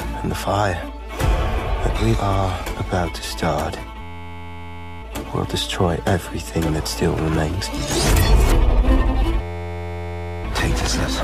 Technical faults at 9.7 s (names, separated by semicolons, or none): system hang loop